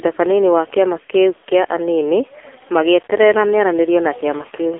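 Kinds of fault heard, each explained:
AMR narrowband mobile codec, throughout: speech is confined to a telephone band of 300 Hz to 3.6 kHz, nothing above 3.7 kHz, and rebuilt from a vocal-tract model fed sparse pulses, giving a heavily buzzy, synthetic tone that fits a low rate near 6.7 kbps.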